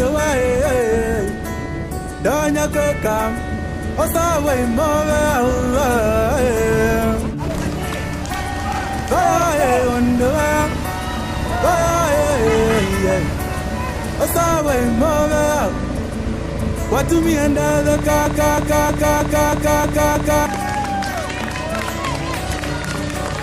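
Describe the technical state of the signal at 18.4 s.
At 18.4 s you're right inside a broken-record loop that runs from 18.26 s to 20.46 s. A fragment of about 0.32 s plays seven times back to back, each pass identical, so the sound stutters in place instead of moving on. The likely culprit is a stalled player or stream that kept resending the last chunk it held, which means whatever should have played across those two-odd seconds is gone.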